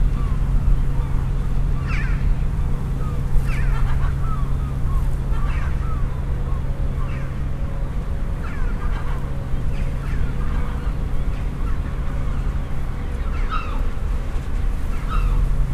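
An everyday sound recording carrying a doubled audio track for its whole length: a second full-band copy trails the original by around one and a half seconds, roughly 5 dB quieter, with no decay or room colour, likely from a slower second capture path.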